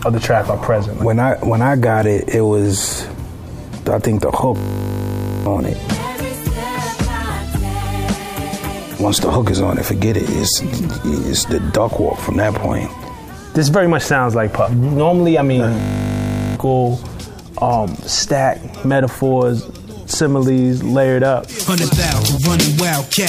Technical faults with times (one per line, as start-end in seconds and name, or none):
4.56-5.46 system hang loop
15.80-16.56 system hang loop